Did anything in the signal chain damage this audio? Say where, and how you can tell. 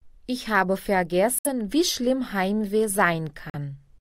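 Yes. Two short silences break the audio, from 1.39 to 1.47 s and from 3.50 to 3.55 s, and each time the sound picks up further along, as though it kept playing through the gap. The likely cause is a Bluetooth dropout on the wireless link to the headphones: packets arrived too late and were discarded, leaving nothing to play. On a waveform each gap is a flat stretch; on a spectrogram, a blank vertical column spanning all frequencies.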